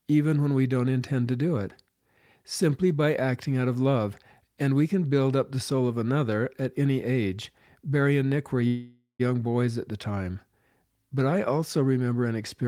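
It's a speech recording with one call audio freeze, from 8.67 to 9.21 s. The last bit of sound gets stretched into a fading buzz or hiss, and the final tenth of a second or so goes silent. Then the talk picks up exactly where it left off, with nothing skipped. That points to packets likely being held up in transit and the jitter buffer running dry. Everything after it lands about half a second later than it should.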